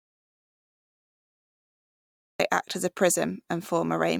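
A speech recording whose audio dropout to silence runs from the start to 2.40 s, likely a lost input. The waveform sits flat with a blank spectrogram, then speech resumes at "act as a".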